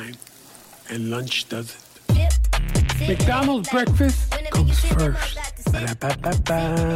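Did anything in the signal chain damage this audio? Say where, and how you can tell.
No, the signal chain shows no audible damage at any stage, from capture through conversion to playback.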